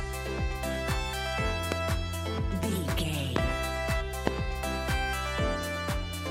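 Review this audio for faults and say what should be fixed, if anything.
Loud pops at 1.72–1.74, 3.36–3.38 and 4.27–4.30 s, each a single spike about 20 dB above the sound, likely voltage steps from switching or static. They appear as tall narrow waveform spikes and full-height vertical spectrogram lines. Prevent them by securing connections, muting before switching, and grounding equipment against static.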